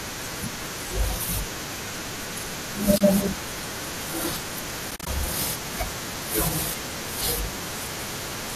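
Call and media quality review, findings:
Soft dropouts at 2.98–3.01 s and 4.91–5.07 s. The first is a 30 ms hole. The second is 90 ms of gaps over 160 ms, the longest around 40 ms. This is AAC frame loss with muting: lost frames decode as silence and fade via window overlap. The short holes point to about 10 ms frames, which fits the stream, likely low-delay AAC.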